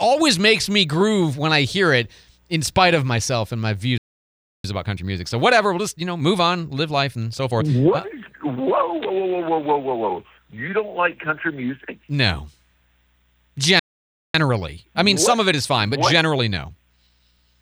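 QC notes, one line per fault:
3.98–4.64 s, playback stall: the audio cuts out mid-flow and sits silent for about 0.66 s before picking back up. A dropout that long with a clean restart points to the player likely running dry on buffered data or having its thread held up, rather than anything in the recording.
4.64–7.64 s, time-compressed catch-up: for 3 s after the restart everything runs hurried, about 1.15 times normal speed, yet pitch stays put. The player is working off its backlog by snipping out tiny slices and cross-fading the joins.
13.79–14.35 s, playback stall: same story again, a hole of about 0.55 s in the middle of the sound, then it resumes. The likely cause is again the player starving for data or getting blocked.
14.35–17.35 s, time-compressed catch-up: another 3 s rushed stretch at about 1.15 times speed, pitch unchanged, as the player shrinks its queue back down.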